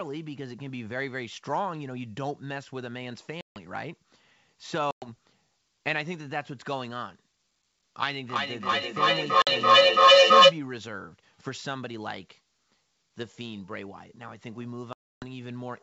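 Packet loss on an ADPCM call cuts hard silent holes at 3.41 s (150 ms), 4.91 s (110 ms), 9.42 s (50 ms) and 14.93 s (290 ms). The decoder loses track of the sender, so speech returns slightly distorted. From 8.17 to 10.62 s, feedback echo between two devices repeats the speech about every 300 ms. The loop builds to about 18 dB above the speech.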